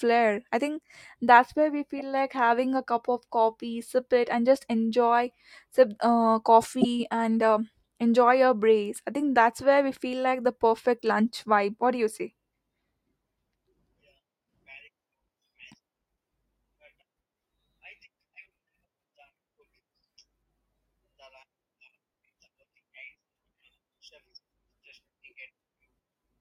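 Speech with a corrupt frame decoded three times, at 1.97–2.01 s, 6.81–6.85 s and 11.00 s. Each event fits roughly two damaged frames: misread data plays as stray energy at the wrong frequencies, peaking near -10 dBFS at 6.81 s. A dropout would leave silence instead.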